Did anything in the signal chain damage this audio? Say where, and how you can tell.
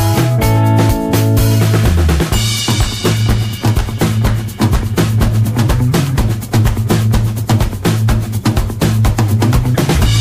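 No, nothing along the chain seems to have left a mark here; the sound comes through intact, with nothing to point at or trace back to any stage.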